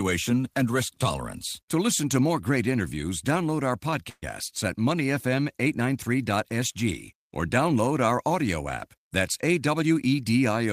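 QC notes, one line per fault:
4.09–4.24 s, call audio freeze: after "great interviews download our", the last sound is stretched into a fading buzz or hiss, with about 40 ms of silence, for 127 ms, likely from late packets draining the jitter buffer. Unlike a dropout, nothing is lost; speech resumes where it stopped, 127 ms later.
8.98–10.24 s, jitter buffer speed-up: after "download our audio app", speech runs at 108% with pitch unchanged, as about a tenth of a second of pitch periods is trimmed to cut delay.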